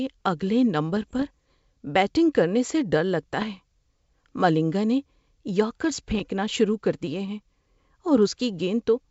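Bit errors on an ADPCM link cause pops and rough bursts at 0.97 to 1.24 s, 3.41 to 3.45 s and 6.11 to 6.21 s. The error rate sounds low, a few tenths of a percent. Each flipped bit upsets the decoder's step size and predictor. The disturbance rings on briefly, with short level jumps.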